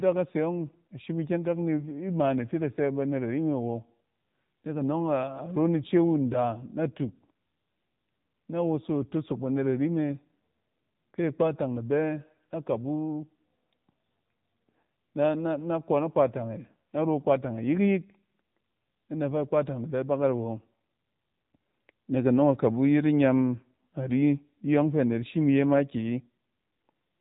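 From start to finish the speech carries the sound of the AMR narrowband mobile codec, with plainly audible damage. A spectrogram shows a hard ceiling at 3.8 kHz with nothing above it, and the harmonics below look smeared from one 20 ms frame to the next. The codec rebuilds the voice from a vocal-tract model fed by sparse pulses, so at a low bitrate, one that fits AMR-NB's 7.4 kbps mode, it sounds muffled, buzzy and somewhat synthetic.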